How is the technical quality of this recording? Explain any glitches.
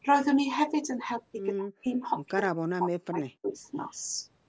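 The recording has two problems, both typical of a hands-free call.

From 1.53 to 1.88 s, and again from 2.33 to 3.47 s, the voice sinks by around 40 dB. That's likely speech suppressed in double talk: with both ends talking, the echo canceller clamped down on everything. It's about a fifth of a second in the first stretch and roughly a second in the second.

At 3.92 to 3.97 s there's a brief, very faint echo leak, a ghost copy of the voice trailing it by 148 ms. The far end's canceller likely let a scrap of its loudspeaker pickup slip back down the line.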